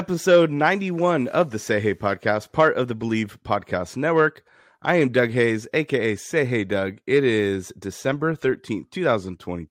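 Nothing goes wrong anywhere in this bit of speech, so there's no fault to point to at any moment.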